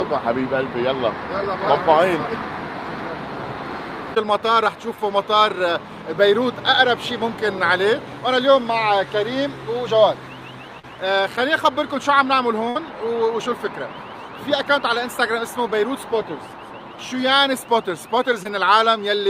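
Packets of this call audio arrived too late or not at all in three places, and the receiver covered the holes. Short concealed packet loss struck at 10.79–10.85 s and 18.43–18.47 s, dropping roughly 40 ms and 20 ms. The decoder extended the preceding sound across each gap and then blended back, leaving a brief smear or wobble. A burst of packet loss at 12.69–12.77 s removed about 60 ms. That gap was bridged by a continuation of the last sound that faded as it went, heard as a held buzz or dying hiss before the audio jumps ahead.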